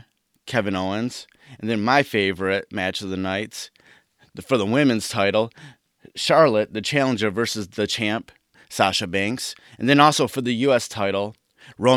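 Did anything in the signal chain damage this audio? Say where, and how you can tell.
No, nothing in the signal chain damaged this audio, and there is no point where any harm can be heard.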